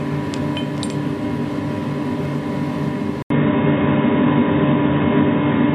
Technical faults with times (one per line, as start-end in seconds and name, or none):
3.22-5.74 input switched to a poorer device